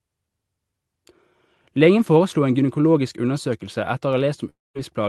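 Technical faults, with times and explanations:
4.49 to 4.77 s, long network dropout: the speech stops and is replaced by about 250 ms of fill, a fading buzz that leaves roughly 200 ms of silence before the speech resumes, with about 260 ms of it gone, likely because packets stopped arriving and the receiver concealed the gap.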